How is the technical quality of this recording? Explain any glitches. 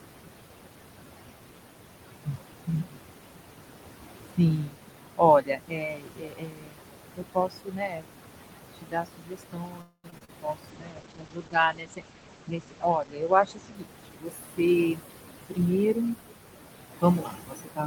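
The recording is degraded by call-processing problems: noise suppression runs throughout, speech is cut in several places, and a cluster of network faults falls between 9.81 and 14.43 s.

Noise suppressor artifacts run through the whole clip. The room noise sits only about 8 dB below the speech, so the suppressor works hard, pulling the steady background down by about 21 dB, frame by frame. It pumps between phrases and rises under the speech.

Speech cut by the noise suppressor occurs at 2.25–2.99 s, across a long stretch from 4.3 to 16.17 s, and again at 16.92–17.86 s. The suppressor classifies quieter parts of the speech as noise and attenuates them along with the background, by up to about 22 dB. In the first span roughly half a second is affected. In the long span the total is around seven seconds. Soft consonants and word endings sound swallowed or faint.

A call audio freeze runs from 9.81 to 10.06 s. 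The audio stalls and the last sound is stretched out as a fading buzz or hiss for about 226 ms, including about 40 ms of near silence. It then resumes where it stopped. The likely cause is packets held up in transit, which let the jitter buffer run dry. Because the audio picks up where it left off, nothing is lost, but a gap of that length has been inserted.

Short concealed packet loss follows immediately, at 10.10–10.14 s, 10.18–10.23 s and 10.25–10.30 s. Each time, 20 to 40 ms of audio did not reach the decoder in time. The receiver extrapolated from the preceding sound and then blended back into the real signal. Each event is a brief smear or wobble, and a short consonant can drop out entirely.

A call bitrate drop spans 10.7 to 14.43 s. The encoder rate falls from 32 to 12 kbps and stays at the lowest point for about 2.2 s. The audio bandwidth shrinks from 20 kHz to 8 kHz. The bandwidth estimate fell, so Opus coded more coarsely and discarded the upper band. 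Through this stretch the speech sounds muffled and rough until the rate recovers.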